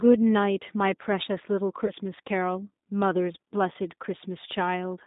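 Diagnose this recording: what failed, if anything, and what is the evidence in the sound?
The codec stage is at fault: the G.729 codec damage is plainly audible. The whole clip is confined to roughly 200 Hz to 3.7 kHz, so a spectrogram shows an empty band above that. The speech sounds rough and synthetic because it is rebuilt from a filter, pitch predictor and sparse pulses at 8 kbit/s.

The network stage caused VoIP packet loss, concealed by the speech codec, from 1.86 to 1.92 s. About 20 ms of audio went missing, which fits a single lost packet. The decoder repeated its last pitch and filter at falling gain. This shows as a smeared stripe that fades and a sagging waveform envelope that recovers only after the gap.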